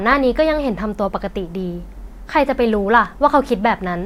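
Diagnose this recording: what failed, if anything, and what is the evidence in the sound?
A short train of clicks runs from 2.73 to 3.06 s in the speech: about three near-identical pulses at roughly 6 per second, spaced unevenly, peaking at about the level of the voice. The clicks are likely interference pulses coupled in through the analogue wiring or a briefly struggling interface. They sit on top of the sound, which carries on underneath, whereas buffer dropouts would cut gaps into it and a codec fault would smear it.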